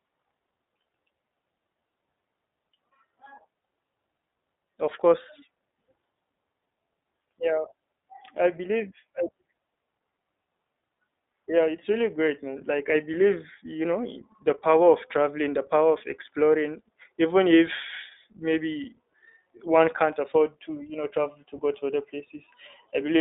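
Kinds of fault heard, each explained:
iLBC codec: The speech has been through a narrowband VoIP codec that codes each 20 ms frame on its own. The band runs only from about 200 Hz to 3.7 kHz, so nothing above 4 kHz passes. Coding damage is plainly audible, leaving the speech rough and synthetic, which fits a rate near 15 kbps.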